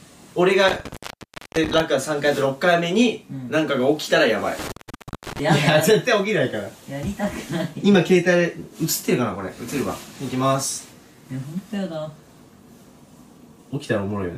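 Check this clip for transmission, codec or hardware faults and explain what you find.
Two dropouts from an intermittent contact, at 0.68–1.80 s and 4.59–5.40 s, open the line for about 0.61 s and 0.55 s. A loose cable or plug breaks the path, leaving faint hiss with crackle at each edge: near-flat waveform gaps framed by broadband vertical spikes on a spectrogram.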